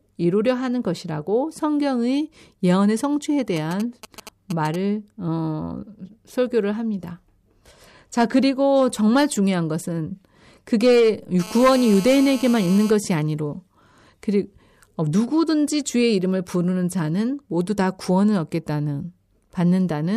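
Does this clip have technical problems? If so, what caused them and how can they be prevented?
Yes. From 3.56 to 4.76 s there are GSM signalling bursts: a galloping dit-dit-dit of short buzzes repeating at about 217 Hz, roughly 15 dB below the speech. A 2G phone nearby is sending brief groups of radio pulses while it handshakes with the network, and some part of the audio circuit rectifies that RF into audible clicks and buzz. Keeping handsets several metres from microphones, cables and preamps, or switching them to flight mode, prevents it.

From 11.40 to 12.91 s there is a GSM phone buzz, a hard, raspy tone at about 217 Hz with many harmonics, sitting about 16 dB below the speech and unrelated to it. Here the phone is in an active call, so it transmits continuously in bursts 217 times a second, and the rectified pulse train comes through as a nearly steady buzz. Shielded, balanced cabling and keeping phones away from the recording chain prevent it.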